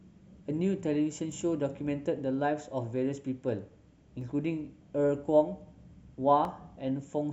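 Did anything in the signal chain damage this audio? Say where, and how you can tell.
Yes. Three isolated clicks in the speech, at 1.32 s, 4.21 s and 6.45 s, are dropped samples, with the likely cause a driver or buffer stage occasionally losing a fraction of a millisecond of data. At each point the waveform steps abruptly from one value to a later one with nothing in between, and on a spectrogram each click is a thin vertical line running across all frequencies. Nothing audible is lost, only the discontinuity.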